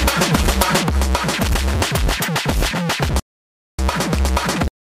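The sound cuts out in a playback stall from 3.20 to 3.79 s, about 0.59 s of silence, likely from the player starving for data. From 3.79 s to the end, time-compressed catch-up hurries the backlog at about 1.1 times speed by splicing out small pieces, while the pitch stays unchanged, unlike a plain speed-up.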